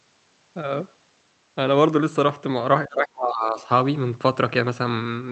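From 2.87 to 3.67 s the speech sinks sharply and breaks into fragments, losing its upper frequencies, with the deepest dip around 30 dB below the surrounding level and most of that stretch affected. This is speech suppressed in double talk, likely from an echo canceller that could not tell the near talker from loudspeaker echo and attenuated both. On a waveform the envelope collapses into ragged stubs. A spectrogram shows the band thinning and going dark, under the call codec's ceiling near 8 kHz.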